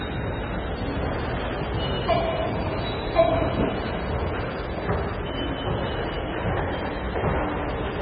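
An everyday sound recording with MP3 compression damage throughout. Nothing is heard above 5 kHz. Weak detail swirls and chirps, and attacks smear. This likely comes from a very low bitrate, near 16 kbps.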